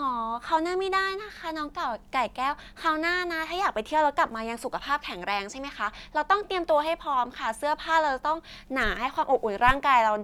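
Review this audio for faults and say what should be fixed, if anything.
No faults turn up in this audio, so nothing needs to be fixed.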